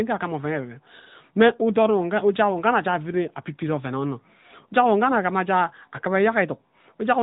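All the way through, the speech has AMR narrowband mobile codec damage, plainly audible: cut off at 4 kHz, buzzy and synthetic, which fits AMR-NB's 10.2 kbps mode.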